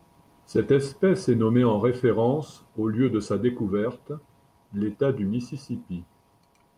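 Nothing in the recording stood out as a technical fault on listening.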